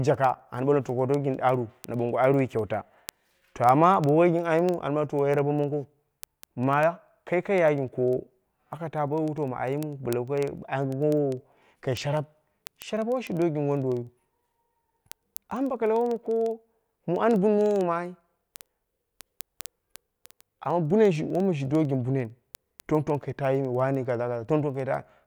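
From 0.14 s to 25.2 s the speech carries word clock ticks: a steady series of sharp ticks of uneven strength at roughly twenty per second, several hundred in all. The receiving device was running on its own clock rather than locking to the sender's digital link, and the two drifted apart by something on the order of 500 ppm. Each time they slipped past one another, one sample was dropped or repeated, producing a tick at that regular interval.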